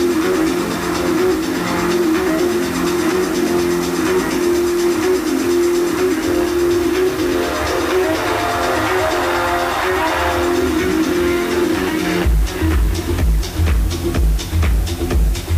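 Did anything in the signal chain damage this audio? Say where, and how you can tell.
Yes. The damage sits at a sample-format conversion stage, where the audio was requantised to low bit depth with dither, only 5 bits, with random dither added before rounding. That dither decorrelates the rounding error from the signal, so instead of gritty distortion the error turns into a steady, even white hiss. It runs through the whole clip at a constant level, roughly 20 dB below the signal.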